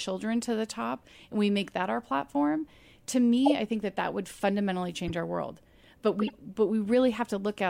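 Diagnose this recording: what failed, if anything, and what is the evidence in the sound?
The codec stage failed: a corrupt frame was decoded three times. Short bursts of foreign chirpy noise sit on the speech at 3.46–3.52 s, 5.07–5.11 s and 6.19–6.36 s, peaking around −15, −25 and −20 dBFS. Damaged bits were decoded as wrong gains and codes, putting energy at unrelated frequencies for a few frames each time. Concealed packet loss would sound muffled or repeated, and a click would be instantaneous.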